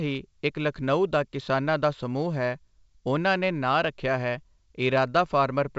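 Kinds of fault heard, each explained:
Nothing stood out on listening to this speech clip.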